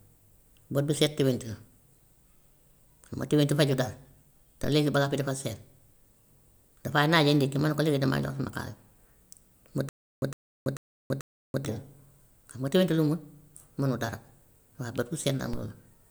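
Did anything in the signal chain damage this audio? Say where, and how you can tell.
Yes. A DC step occurs at 4.64 s and again at 15.53 s, at the converter stage. Each is a low thump as the waveform's zero line jumps, then creeps back as a roughly 5 Hz high-pass pulls it home. On a spectrogram it shows as a brief smear at the bottom.

A stutter with silent gaps runs from 9.89 s to 11.65 s. A 108.5 ms burst repeats four times, every 440 ms, separated by about 331 ms of digital silence. This is likely a stalled playback or stream buffer replaying its last fragment. The spectrogram shows identical blocks between blank columns, and the waveform drops to silence in between.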